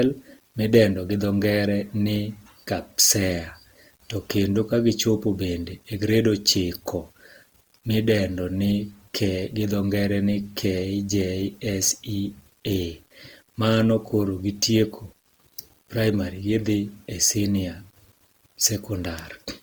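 From the start to the end of the speech, a grainy distortion rides on the signal, most exposed in quiet passages and decays, where it turns gritty. That is low bit depth without dither, likely rounding to around 9 bits. Unlike dithered hiss, the error follows the signal, with noise roughly 35 dB below it.

Throughout, there is also Opus compression, likely in its CELT music mode at a rate that points to about 24 kbps. Voiced tones sound rough and noisy rather than swirly as with MP3, because band energy is kept and gaps are filled. The band still reaches about 20 kHz, so it is not the muffled speech-mode sound.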